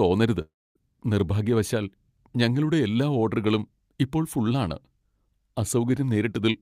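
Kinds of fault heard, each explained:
long network dropout: from 0.41 to 0.77 s the sound decays into a fading buzz, then near-silence, before "നിർഭാഗ്യവശാൽ ഞങ്ങളുടെ എല്ലാ ഓഡറുകളും"; likely lost packets the receiver papered over.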